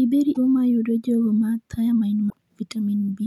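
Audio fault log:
0.30–0.37 s and 2.26–2.33 s: damaged data in a compressed stream. Each is a roughly 70 ms blip breaking into the speech: corrupted bytes make the decoder misread those frames and lose sync, producing garbled output until it locks onto the next valid frame header.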